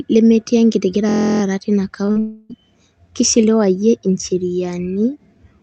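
From 1.09 to 1.42 s the speech turns into a steady, rough buzz at about 43 Hz: a system hang loop, where the machine stalled and the sound hardware replayed one 23 ms stretch fourteen times, which fits a 1024-sample buffer. Little or no audio appears lost.

At 2.05 to 2.09 s, and again at 2.11 to 2.18 s, the speech briefly smears and wobbles. These are short concealed packet losses of 20 ms and 40 ms, where the receiver bridged each gap by extending the preceding sound before blending back.

From 2.20 to 2.52 s a drawn-out, fading continuation replaces the speech without falling to silence, likely a long network dropout. About 300 ms never arrived, and the concealment stretched the last sound across the gap, so the speech resumes with that part missing, still carrying the Opus call path's 8 kHz bandwidth limit.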